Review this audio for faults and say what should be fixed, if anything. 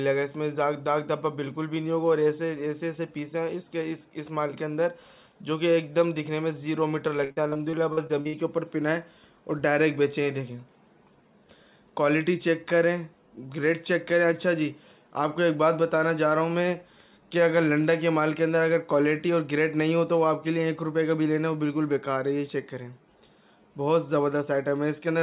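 Repeated packet loss (robotic sound) runs from 7.24 to 8.35 s. Around ten short holes, the longest about 61 ms, are each patched by stretching the preceding sound, so roughly 30% of that stretch is synthetic fill. That produces a choppy texture with pieces missing rather than the clean silences of plain dropouts. The G.711 call path's cut-off at 4 kHz is audible throughout. Steadier network delivery or a deeper jitter buffer would prevent this.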